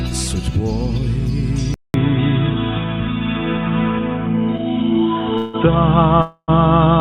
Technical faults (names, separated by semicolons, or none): input switched to a poorer device; call audio freeze